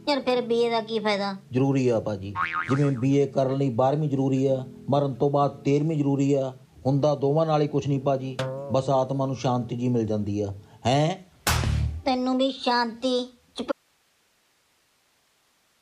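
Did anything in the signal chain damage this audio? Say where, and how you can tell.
Yes. An audio dropout to a faint residue starts abruptly at 13.72 s and lasts to the end: the signal vanishes mid-flow, leaving only hiss around 40 dB below it. The input stayed live, so the likely cause is an analogue connection breaking.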